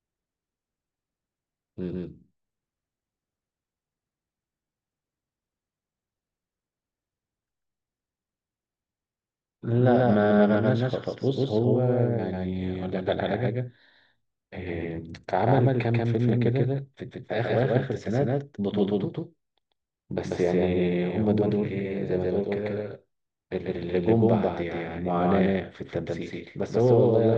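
A doubled audio track runs throughout the speech: a second, equally loud copy trails by roughly 150 ms, likely from a slower capture path, sounding dry and slapback-like.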